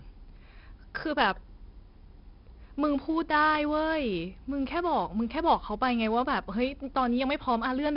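From start to finish a gritty hiss rides on every loud stretch of the speech, sharp onsets crunch, and nothing reaches above 5.3 kHz. This is heavy 4-bit ADPCM compression: each sample is a coarse step from a prediction, the adaptive step size lags fast attacks, and the sound points to about 44 kbps.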